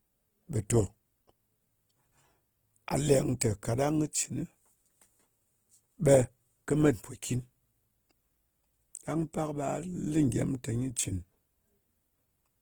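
Speech runs the full length with a rough, grainy texture and noisy tones, though the sound still reaches about 20.1 kHz. This is likely Opus compression in its music (CELT) mode, which fits a bitrate of around 16 kbps.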